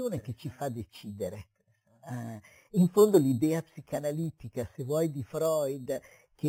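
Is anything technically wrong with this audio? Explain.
Yes. Throughout, there is imaging from sample-and-hold upsampling, which fits audio raised from 8 kHz to 48 kHz by repeating samples. The lowest mirror copy sits between 4 kHz and 8 kHz at about -21 dB, adding a metallic fizz that tracks the speech.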